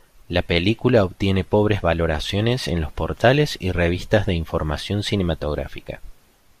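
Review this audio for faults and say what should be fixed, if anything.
DAB burbling occurs from 3.81 to 4.22 s, between "en los portales y" and "de información", and again briefly at 5.86 s. Bit errors slipped past error correction into the MP2 data. Corrupted samples put short blips of noise into single sub-bands. Better reception or a stronger aerial would prevent it.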